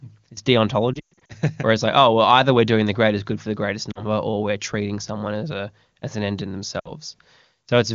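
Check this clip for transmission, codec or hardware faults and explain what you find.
Lost AMR speech frames cause three gaps, heard over wideband HD Voice audio whose clarity fits a top-rate 23.85 kbit/s stream.

Lost AMR speech frames, 0.94 to 1.32 s: about 240 ms of speech is missing, scattered over 360 ms, with the longest run lasting 120 ms. Each corrupted frame failed its error check, so the decoder repeated the last good pitch and vocal-tract settings at falling gain. The sound warbles, smears and sags toward silence before recovering roughly. Shorter losses follow at 3.91 to 4.05 s, about 40 ms between "good for the greatest" and "or we're treating someone", and at 6.79 to 6.92 s, about 60 ms after "as an end in", each dropping to near silence before the voice returns weak or rough.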